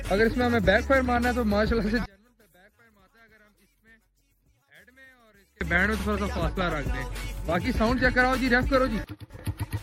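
The whole clip has a watery, swirly quality with dulled treble and smeared attacks, most likely MP3 compression at a low rate, something around 64 kbps. From 2.06 s to 5.61 s the mono sum drops by about 34 dB, leaving only a faint remnant, which sounds like one channel inverted and cancelling its partner. At 5.99 s a 48 ms chunk plays twice, a short stutter from repeated frames that stretches the audio by 48 ms.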